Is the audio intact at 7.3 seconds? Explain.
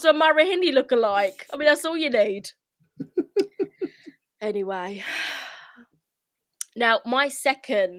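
Yes, at 7.3 seconds the speech plays through intact, with no dropout, click, distortion or other fault to be heard at that moment.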